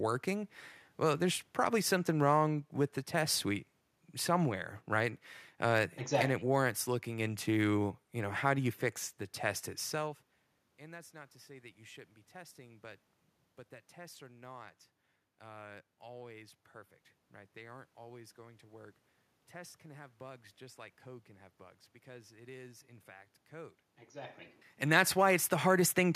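Speech recording with no technical faults; the room noise belongs to the recording space, and the level shifts around 10 s and again near 24 s are the talker moving relative to the microphone.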